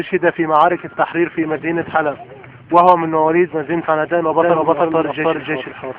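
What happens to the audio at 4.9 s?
A doubled audio track runs from 4.40 s to the end of the clip, so 4.9 s falls inside it. A second full-band copy of the same sound plays about a third of a second behind the first, at roughly the same loudness. The likely cause is the signal being captured again through a slower path. The copy arrives dry, with no decay or room colour, and it cuts in abruptly at 4.40 s.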